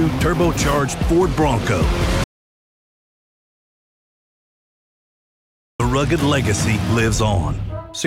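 At 2.24 s the sound cuts off abruptly and the track falls to complete silence. This is an audio dropout to silence. It lasts until 5.80 s, so about 3.56 s of material is missing. No room tone or noise floor remains in the gap; it is plain silence. The sound then resumes mid-flow. The likely cause is a lost input, such as a disconnected device or failed link, while recording continued writing silence.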